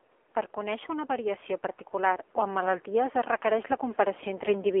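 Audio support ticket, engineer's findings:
AMR narrowband mobile codec throughout. Speech band-limited to 300 Hz–3.4 kHz, plainly buzzy and synthetic. Consistent with a low AMR-NB mode, around 7.4 kbps.

Automatic gain rising, 0.54 to 4.76 s. Speech and background swell together by about 8 dB. AGC judged input too quiet, ramped gain up slowly.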